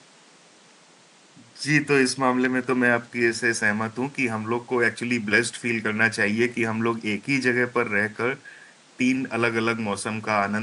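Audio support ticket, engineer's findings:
Engineer's findings: no fault found in this speech audio, only faint room noise about 30 dB below the speech.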